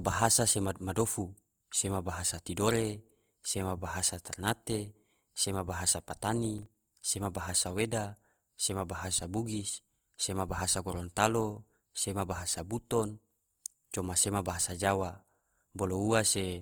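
A speech recording that has most likely passed through Opus compression in its music-oriented CELT mode at a low rate, something like 24 kbps. Starved of bits, the encoder keeps each band's energy but fills in the fine detail with folded or noise-like content. Throughout the clip the voice turns audibly grainy and rough rather than swirly, with its harmonics smeared into hiss, though the bandwidth still reaches about 20 kHz. Between 6.45 and 6.75 s, after "bahasa ternate sema bahasa" and before "sema bahasa weda sema", there is processor overload crackle. The playback or capture process fell behind and missed the deadlines of a handful of very short buffers, each only a few milliseconds long, in quick succession. Each missed buffer left a hard-edged gap of silence, so the speech tears into a brief gritty crackle that stops once the load passes.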